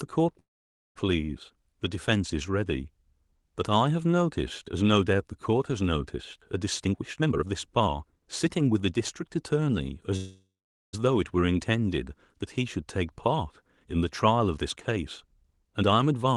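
At 0.39 s the speech halts. The last sound is drawn out into a fading buzz or hiss, then about half a second of silence follows, and the speech resumes at 0.98 s exactly where it stopped. Nothing is lost, but everything after runs 0.56 s late. This is a call audio freeze, likely from packets held up in transit so the jitter buffer ran dry and the receiver had to stretch and then mute the last audio.

From 6.85 to 8.92 s the speech sounds hurried, running at 126% of normal speed with its pitch unchanged. This is a jitter buffer speed-up. The buffer was holding more than it wanted, so the receiver repeatedly cut out tiny pitch-period-sized slices, about half a second in total, to shrink the delay.

At 10.16 s a second freeze behaves the same way. The sound trails off into a fading buzz or hiss and then about 0.45 s of silence before resuming at 10.95 s, now a further 0.77 s behind.

From 14.57 to 16.30 s a milder speed-up runs the speech at 107%, trimming a little over a tenth of a second. 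Throughout, the top end stops near 12 kHz, which fits the Opus call codec on this path.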